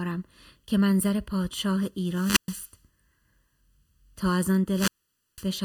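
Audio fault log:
Throughout: channel delay (comb filtering). One channel arrives late by a little under a millisecond and is summed with the other, so shared content cancels at evenly spaced frequencies starting near 700 Hz. The result is a hollow, phasey tone whose notches stay fixed, unlike a moving flanger sweep.
2.00 to 2.77 s and 4.69 to 5.48 s: wireless microphone squelch dropout. Each time the radio signal fades, hiss rises, then the receiver's squelch mutes the output, for about 119 ms in the first event and about 503 ms in the second, before the sound returns. The hiss building ahead of the silence sets it apart from a clean digital gap or packet loss.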